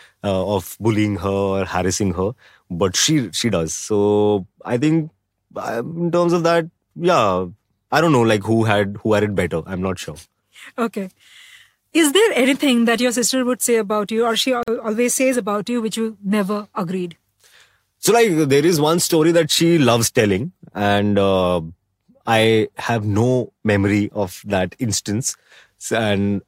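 It's a speech recording with a gap at a join of encoded pieces at 14.63 to 14.68 s: a 46 ms hole where separately encoded chunks were butted together with their encoder delay and end padding left in.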